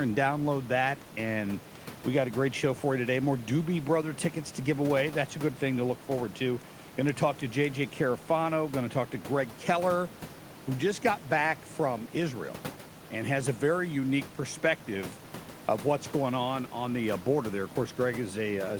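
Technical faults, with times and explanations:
No technical faults detected; the room's background noise sits about 18 dB below the speech and belongs to the recording, not the system.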